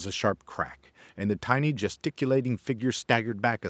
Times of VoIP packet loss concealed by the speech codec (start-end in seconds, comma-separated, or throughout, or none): none